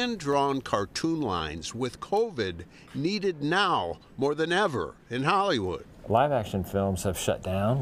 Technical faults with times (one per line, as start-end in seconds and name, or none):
1.38 repeated buffer